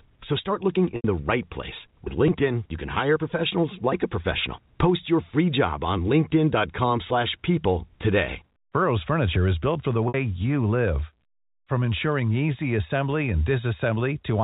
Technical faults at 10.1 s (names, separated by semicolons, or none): packet loss with pitch repetition